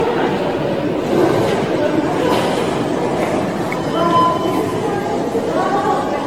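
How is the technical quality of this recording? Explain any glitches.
The recording is compromised throughout by generation loss, with the whole clip carrying a swirly, hollow, smeared quality and softened attacks. The likely cause is repeated lossy re-encoding, something like a dozen or more passes through AAC-LC at rates that fit roughly 96 to 120 kbit/s. Each pass requantises on a shifted frame grid, so noise and spectral gaps pile up. Unlike a single low-bitrate encode, the damage exceeds what that bitrate explains, while the band still extends to about 18.6 kHz.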